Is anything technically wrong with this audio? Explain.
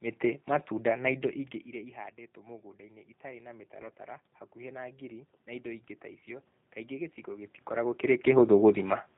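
Yes. Three faults can be heard.

Throughout, the speech carries G.729 codec damage, which fits a setting of about 8 kbit/s. The codec rebuilds each 10 ms frame from a vocal tract filter, a pitch predictor and a few pulses. Nothing above 4 kHz survives. The voice sounds narrow, rough and plainly synthetic.

From 3.82 to 3.90 s there is VoIP packet loss concealed by the speech codec. About 20 ms of audio went missing. The decoder filled the gap by extending its last pitch and filter at falling gain. This briefly stretches the sound, and the voice stays weak or distorted while the decoder recovers.

From 4.53 to 8.31 s the automatic gain is rising. The input had become much quieter, about 18 dB down, so the gain control raised its level by about 5 dB over several seconds. Voice and room noise swell together slowly. The talker's own movement near 7.5 s also shifts the level.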